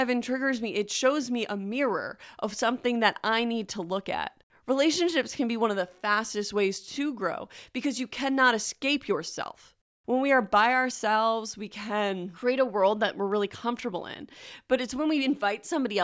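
Nothing stood out as a technical problem on listening to this speech recording.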